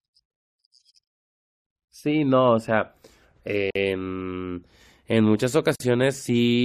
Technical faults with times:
3.71-3.75 gap at a join of encoded pieces
5.75-5.80 gap at a join of encoded pieces

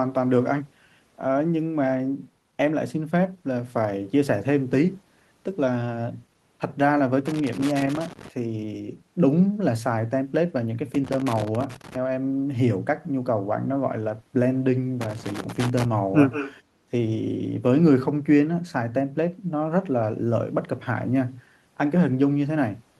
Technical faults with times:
7.26-8.28 loose connector crackle
10.94-11.95 loose connector crackle
15.01-15.85 loose connector crackle
16.31-16.54 echo leak
16.63-16.89 background gated by the echo canceller

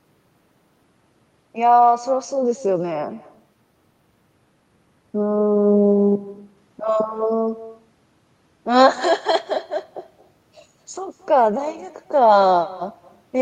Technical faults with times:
0.00-13.41 echo with no canceller

